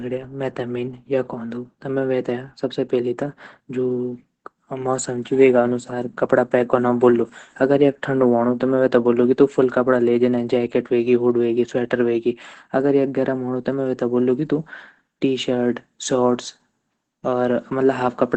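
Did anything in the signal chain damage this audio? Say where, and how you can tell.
Yes, at the codec: Opus voice compression throughout. Speech sounds muffled and hoarse, nothing above 8.9 kHz, which fits SILK wideband near 12 kbps.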